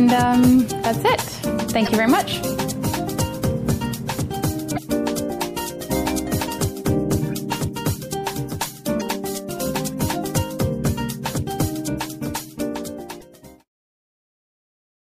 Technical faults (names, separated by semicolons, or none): MP3 compression; damaged data in a compressed stream